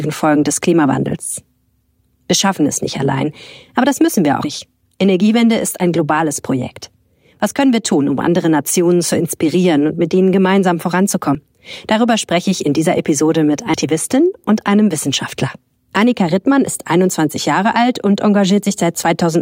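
At 4.44 s the sound jumps forward. The same happens at 11.35 s, and again at 13.74 s. There is no gap of silence. The audio simply resumes later than it should. The first two skips lose about a tenth of a second each. The third loses roughly a third of a second. This is likely a dropped buffer (overrun). The samples were overwritten before they were read.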